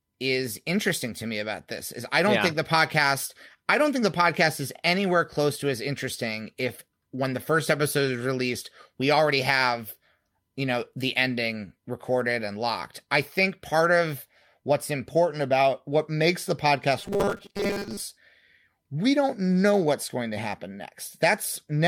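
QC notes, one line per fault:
16.99–18.02 s, robotic sound from repeated short buffers: speech turns into a rigid metallic 200 Hz buzz, likely because audio arrived too seldom and a 5 ms block was looped through most of this span. The spectrogram shows flat harmonic lines every 200 Hz, and the waveform shows identical repeating cycles.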